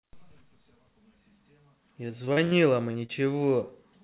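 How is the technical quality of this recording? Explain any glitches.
The recording has audible dropouts clustered in the back half, riding on a narrowband call path where nothing reaches above 4 kHz, which fits a telephone codec like G.711.

From 2.08 to 2.53 s there's repeated packet loss with a robotic sound: four separate holes, the longest about 68 ms, together covering roughly a third of that stretch. Each time, the receiver extends the last bit of audio to paper over the gap, so it comes out choppy, with pieces missing.

Then there are two quick short concealed packet losses, at 2.91 to 2.96 s and 3.06 to 3.10 s. A few tens of milliseconds never arrived, so the decoder patched each with a continuation of the preceding sound before blending back, leaving a brief smear or wobble.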